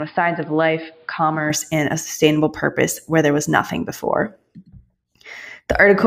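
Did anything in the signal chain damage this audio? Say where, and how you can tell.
Yes. Until 1.5 s the speech is dull, with nothing above 5 kHz, about 5 dB quieter, and over its own hiss about 35 dB down. It clears before "and a sustainable purpose". This is likely an input switched to a poorer device at the driver stage. A codec bandwidth drop wouldn't also shift level and noise floor.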